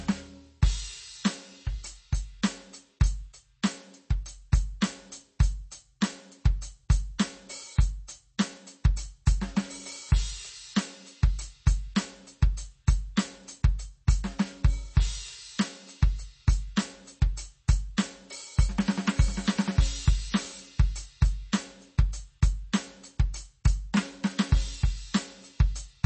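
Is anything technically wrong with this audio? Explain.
Yes. Throughout the music, likely MP3 compression at a low bitrate, around 32 kbps, damages the sound plainly: nothing above 8.3 kHz, and weak frequency lines drop in and out between frames, giving a swirly, watery texture that a simple low-pass filter would not produce.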